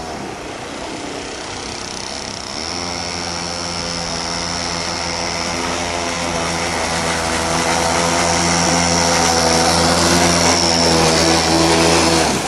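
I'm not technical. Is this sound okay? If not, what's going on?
Yes, nothing wrong turns up anywhere in the clip, so there's nothing you need to fix.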